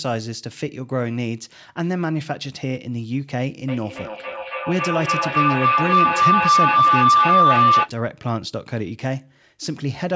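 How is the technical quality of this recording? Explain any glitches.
A feedback howl mars the recording. From 3.68 to 7.95 s, a loop between a microphone and a loudspeaker on the same call gained level on each pass, so the sound built into a tone near 1 kHz, pulsing about every third of a second and peaking at about 8 dB above the speech.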